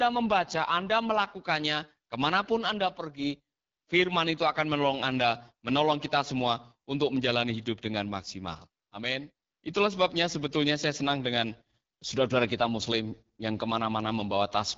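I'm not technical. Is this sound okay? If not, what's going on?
No. The whole recording went through the AMR wideband (HD Voice) codec, a phone-call compression, at one of its lowest quality settings. That makes the speech sound rough and raspy from start to finish, with nothing above about 7.5 kHz, so it sounds dull and phone-like.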